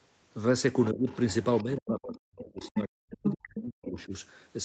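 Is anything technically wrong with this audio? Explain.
Yes. There are two faults, and they interleave.

Other side's voice leaking through: a second voice appears at 0.83–0.88, 1.08–1.63, 2.58–2.80, 3.24–3.35, 3.57–3.61 and 3.99–4.04 s. It ranges from far below the speech to roughly level with it. The likely cause is loudspeaker sound the echo canceller failed to remove from the microphone.

Speech suppressed in double talk: the talker's voice drops by about 20 dB at 0.92–1.08 s. From 1.64 to 4.12 s it falls by as much as about 40 dB. The echo canceller likely mistook overlapping talk for echo and turned everything down.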